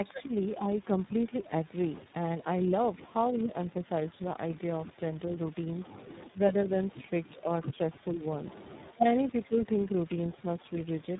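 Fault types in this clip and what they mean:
Tandem speech coding: Throughout the clip, the speech has the stacked roughness, muffling and warble of audio passed through several speech coders in turn. Each coder re-encoded the previous one's damaged output. The character points to three codecs in a row, such as GSM full rate, G.726 and finally iLBC, with G.711 links between them. Nothing remains above 3.8 kHz, so the sound is narrowband and dull.
Speech suppressed in double talk: From 0.23 to 0.33 s, the speech dips for roughly a tenth of a second, falling by around 15 dB at its deepest. This is likely an echo canceller that could not tell the near talker from loudspeaker echo while both sides were active, so it turned everything down. The result is a brief hole in the signal rather than a clean cut.
Echo leak: Between 0.44 and 1.08 s, a faint delayed copy of the speech trails the original by about 437 ms, sitting roughly 35 dB below it. 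This is likely a loudspeaker on one side whose echo canceller left some of the microphone's pickup in place, so that residue was sent back down the line. The echo is quiet and short but clearly separated in time from the direct speech.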